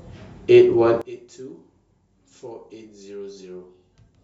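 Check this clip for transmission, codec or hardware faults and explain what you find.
One fault is present. From 1.02 s to the end, the speech drops about 21 dB. Likely one channel inverted, cancelling shared centre content in mono.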